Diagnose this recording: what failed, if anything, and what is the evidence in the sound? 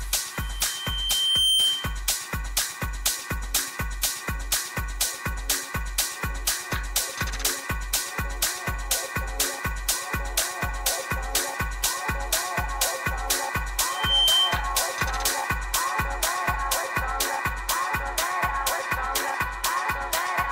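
What failed is the analogue side, specifically a loudspeaker feedback squeal from the mic hearing its own speaker. A single tone at 3.1 kHz swells in from 0.34 s to 2.02 s, taking around a second to build and sitting a few dB above the programme. It comes back from 13.88 s to 14.69 s, climbing faster, in roughly a third of a second, and ending up around 10 dB louder than the signal. Loop gain crept past one at that frequency, so it fed itself.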